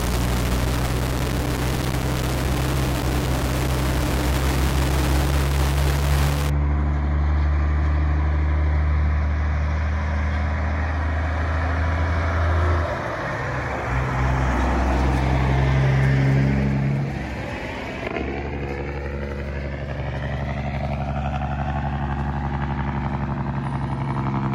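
From the start to about 6.50 s the sound is coarse and grainy, with distortion that rises and falls with the signal and quiet passages sputtering or dropping to nothing. This is low bit depth without dither, likely from rounding to about 3 bits, which puts the error only around 5 dB below the signal. A waveform would show visible stair-steps, and a spectrogram would show broadband hash that tracks the signal rather than a steady noise floor.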